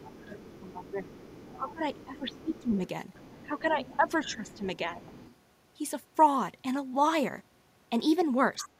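A faint second voice sits under the speech from the start to 2.63 s, roughly 20 dB below it, and returns from 3.13 to 4.58 s, more faintly from 4.97 to 5.36 s (about 25 dB down), and as a brief scrap from 8.6 to 8.68 s. This is the other side's voice leaking through. The far end is likely playing on a loudspeaker at the talker's device, and the echo canceller is not removing all of it from the microphone.

While that second voice is present, the main speech repeatedly sinks. It dips by up to about 15 dB across 0.25 to 1.11 s and again from 1.55 to 2.76 s, by about 10 dB between 3.43 and 5.12 s, and by about 20 dB in a short cut from 8.64 to 8.73 s. This is speech suppressed in double talk. With both sides talking at once, the echo canceller likely cannot separate its own talker from the returning echo and turns both down together.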